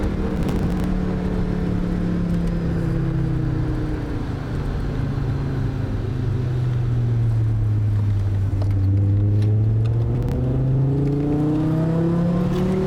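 From 0.31 to 0.84 s, and again from 10.15 to 10.34 s, the audio breaks into gritty tearing: processor overload crackle. The processor keeps missing its deadlines, and each missed buffer is skipped outright, leaving a short hole with hard edges. The rapid run of holes, which fits buffers of around 10 ms, dozens in the first burst and a handful in the second, is what sets it apart from a single isolated dropout.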